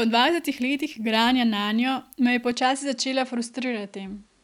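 At 2.51 s the speech loses its top end and stays that way to the end. Nothing above 10.5 kHz survives, so it turns a touch duller and boxier with no gap and roughly the same loudness. A faint new noise floor comes in too, about 45 dB down. That pattern points to an input switched to a poorer device, most likely the system swapping to a different mic with a narrower band and its own background noise.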